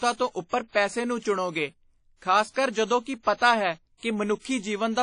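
Speech that sounds washy and ringing for its whole length, with a hiss that swells and fades alongside the voice and nothing above 10.1 kHz. This is likely WMA compression, at a low rate that fits about 32 kbps, smearing quantisation noise over long transform blocks.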